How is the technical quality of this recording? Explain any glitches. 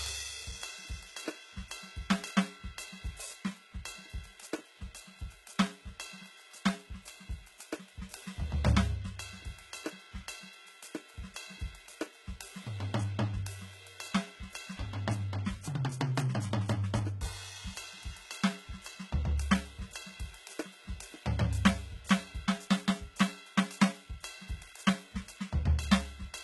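The technical quality is poor, with heavy coding damage across the whole piece of music. From start to finish it carries the signature of HE-AAC compression, likely at a very low rate: the damage level fits a bitrate around 16 kbps. Only the lower spectrum is properly coded. The treble is synthesised by copying lower bands upward under a coarse envelope, so its harmonics no longer align with the true ones above the crossover. The top end sounds gritty and metallic, with nothing at all above about 11.8 kHz.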